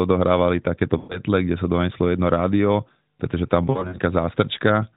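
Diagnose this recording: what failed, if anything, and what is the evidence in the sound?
Lost AMR speech frames on the radio/network leg. At 0.98–1.19 s, just before "kde sa doneslo jedno", about 120 ms drops and the decoder stretches the last sound, then fades it. At 3.70–3.99 s, 140 ms goes in scattered gaps (longest 60 ms), giving dips and warble.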